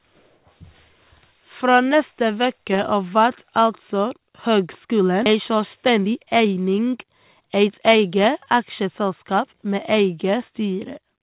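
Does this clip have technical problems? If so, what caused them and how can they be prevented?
Yes. At 5.26 s there is a skip ahead. Playback jumps forward with no gap at all, and roughly 0.7 s of speech is simply missing. The two sides of the jump are butted together, so the sound lurches. The delay drops by about the same amount. Audio that arrived late had piled up, and the jitter buffer discarded a chunk to catch up while newer audio was already waiting. To prevent this, give the jitter buffer enough headroom and stabilise the network so bursts of late packets don't force discards.

From 5.35 s to 8.12 s a jitter buffer speed-up follows. The speech runs at 111 percent speed with its pitch unchanged, so it sounds hurried. The buffer still held more audio than its target. It trimmed short pitch-period-sized pieces again and again, removing roughly 0.3 s in total. The high band stops near 4 kHz throughout, which fits a G.711 mu-law call path. 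To prevent this, reduce network jitter so the buffer doesn't overfill and need to shed audio quickly.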